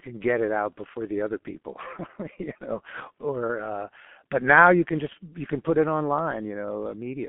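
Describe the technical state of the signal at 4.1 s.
At 4.1 s the speech carries heavy G.723.1 codec damage, present throughout the clip. Its coarse 30 ms frames and sluggish voice model leave the speech muffled and hoarse with smeared consonants, consistent with roughly 6.3 kbit/s. A spectrogram shows energy confined to about 200 Hz–3.4 kHz.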